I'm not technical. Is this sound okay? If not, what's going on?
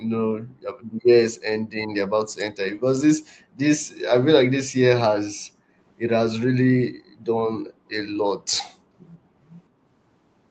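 No. From 6.92 to 7.22 s, the room's background sound drops almost to silence, then returns. This is background gated by the echo canceller. It heard the loudspeaker playing and briefly turned the microphone right down, for about a third of a second.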